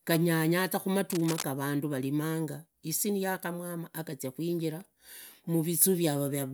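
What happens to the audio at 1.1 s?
A worn cable or connector was likely disturbed from 1.12 to 1.44 s, just after "ganyanya za", causing cable scratch noise: uneven scratchy bursts about 10 dB below the speech.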